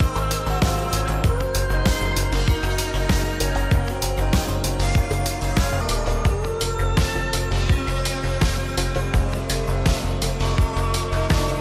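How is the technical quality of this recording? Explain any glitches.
Technical quality breaks down in the second half because of a speed fault. From 5.81 s to the end, a section at the wrong speed runs at 0.857x, likely from a clock mismatch, so the sound slows and drops about three semitones.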